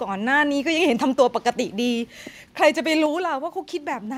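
A speech recording with a microphone volume stepped down at 3.06 s: the level drops by about 4 dB in one step, voice and background together. The waveform envelope narrows abruptly there, and the spectrogram dims evenly across all frequencies. This is likely call software lowering the input gain automatically.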